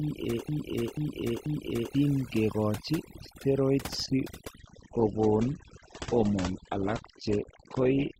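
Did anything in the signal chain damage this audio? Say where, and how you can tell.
Yes. Overdone noise removal runs through the whole clip, at the call-processing or cleanup stage. The background sits at near silence with twinkling specks. A suppressor set too strong is pulling individual frequency bands down whenever they come close to its noise estimate. The quieter parts of the speech fall below that line and vanish along with the hiss.

A broken-record loop is already under way when the clip starts. It runs to 1.95 s, just before "ke kochi steroids si". A segment of about 487 ms plays three times back to back, each repeat identical. The cause is likely a stall in playback or the stream. The source stopped delivering, so the last fragment held in the buffer was sent again and again. Whatever should have played there is lost.

From 4.59 s to the end, right after "ke kochi steroids si", the audio switches to a lower-bitrate version of the adaptive stream. 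Quality drops suddenly, with no gap. Nothing is left above 8.2 kHz, so the speech goes dull and codec artefacts rise. The sound points to Opus dropping from around 64 kbit/s to around 12 kbit/s. That happens at the network and codec stage when the connection slows and the player picks a cheaper rendition.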